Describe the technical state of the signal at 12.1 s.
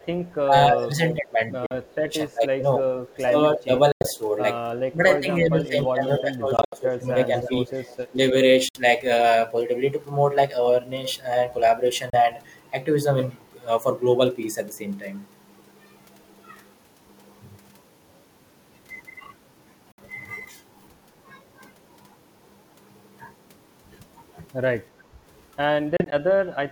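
At 12.1 s the speech cuts to silence until 12.16 s, a likely Bluetooth dropout: packets arrived late, were discarded, and playback resumed further along.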